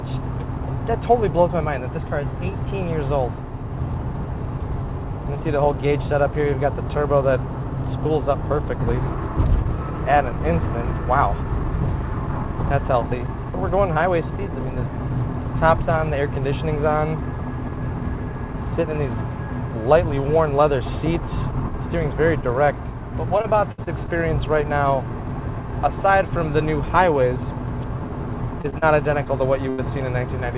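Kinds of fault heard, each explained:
Repeated packet loss (robotic sound): five gaps struck between 23.38 and 24.10 s, each patched by extending the last sound, leaving choppy audio with pieces missing.
Short concealed packet loss: holes of 20 to 40 ms failed to arrive around 28.62 to 29.28 s; the receiver stretched the preceding sound over each, causing brief smears and wobbles.
Burst of packet loss: about 80 ms went missing at once from 29.70 s; the last sound was continued and faded out, then the audio jumps ahead with that portion gone.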